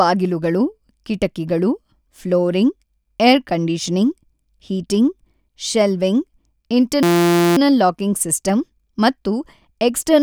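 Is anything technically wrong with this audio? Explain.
Yes, there's a system hang loop in this speech clip from 7.03 to 7.57 s, just before "ಲಾಕಿಂಗ್ ಸಿಸ್ಟಮ್ ಮತ್ತು". The machine or driver stalled while the audio hardware kept replaying the same 5.8 ms slice of its ring buffer, which fits a 256-sample buffer. Repeating that tiny chunk around ninety times gives a steady buzz at about 172 Hz instead of speech. Little or nothing of the speech seems to go missing around it.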